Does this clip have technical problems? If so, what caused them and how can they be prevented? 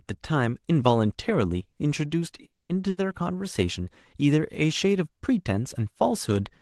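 Yes. From 2.45 to 2.71 s the speech halts: the last sound is briefly carried on, then about 210 ms of near-silence follows, and the speech picks up exactly where it stopped with nothing lost, only delayed by roughly 240 ms. That pattern points to a call audio freeze, likely caused by packets held up in transit until the jitter buffer ran dry. Unlike packet loss, nothing is skipped. A larger or adaptive jitter buffer, plus a steadier network route, would prevent it.

From 2.89 to 2.99 s there is a burst of packet loss. The receiver stretches the last sound and fades it out for about 80 ms, and when speech returns, that 80 ms of speech is gone rather than delayed. The loss shows as a jump in the speech instead of a pause followed by a clean resumption, and the gap is far shorter than the freeze. Enabling Opus in-band forward error correction, or adding redundancy, would help prevent it. The call path's Opus coding at 20 kbps, limited to about 12 kHz, carries through the whole clip.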